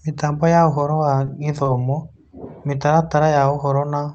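Short stalls from late packets occur at 1.25–1.29 s and again at 1.63–1.67 s, each right after "ya ũhoro wa". Both times a packet arrived late and the jitter buffer ran dry, so the receiver held the last sound for about 20 ms and then resumed where it left off. The sound lingers briefly with a faint dip.

A jitter buffer slow-down follows from 2.86 to 3.67 s. The receiver repeated pitch periods to rebuild its reserve, adding about 47 ms and running at 95% speed. The sound is drawn out at unchanged pitch, heard through the call codec's cut-off near 8 kHz.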